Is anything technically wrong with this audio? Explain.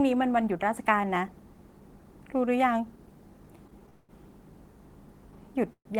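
Yes, there are two faults. From 3.67 to 4.11 s there are repeated stalls (stutter). Five gaps hold the sound, the longest 194 ms, so it drags and stutters.

From 5.73 to 5.87 s there is a call audio freeze. The sound holds, then goes silent for 80 ms, likely because late packets emptied the jitter buffer.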